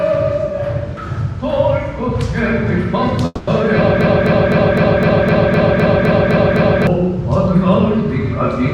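A call audio freeze runs from 3.25 to 3.49 s. The sound smears into a fading buzz that shows as horizontal streaks on a spectrogram, then drops out for about 10 ms before resuming. Everything after it arrives 220 ms late, likely because the jitter buffer ran dry. From 4.01 to 6.87 s, a broken-record loop repeats a 255 ms fragment 11 times. The waveform shows identical repeating blocks, likely from a stalled stream, and the audio that should have played there is lost.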